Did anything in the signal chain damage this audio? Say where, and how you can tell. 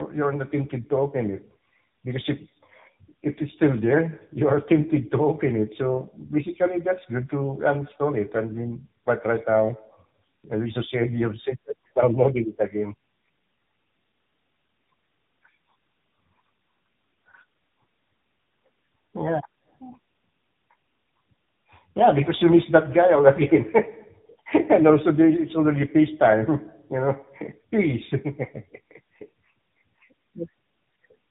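Yes. The speech is rough, muffled and warbly from start to finish, with nothing above 3.8 kHz. That points to tandem speech coding at the codec stage. The call appears to have crossed two low-rate speech codecs in a row, likely GSM full rate and then AMR-NB, bridged by G.711 in between. Each coder re-encoded the previous one's already degraded output, so their distortions compounded.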